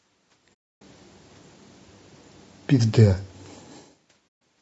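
The speech sounds rough and grainy the whole way through, with a hiss filling the gaps between harmonics and a thin, artificial-sounding top end. This is likely low-delay AAC compression (AAC-ELD): its short frames resolve pitch poorly, and the damage points to a bitrate around 32 kbps.

From 0.54 to 0.82 s the sound fades out and back in, leaving a smooth-edged silence of about 280 ms. A shorter hole of the same kind, about 140 ms, follows from 4.27 to 4.41 s. Both are AAC frame loss with muting: the decoder zeroed the missing frames, and the overlapping windows softened the edges.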